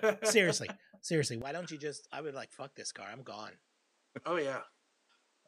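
At 1.42 s, right after "seriously seriously", the sound changes character and stays that way to the end. Nothing is left above 10.1 kHz, the level falls by roughly 10 dB, and a new background noise appears at around 35 dB under the speech. There is no gap at the switch. This is likely an input switched to a poorer device. Unlike a simple filter or gain change, the bandwidth, level and noise floor all shift together at one instant.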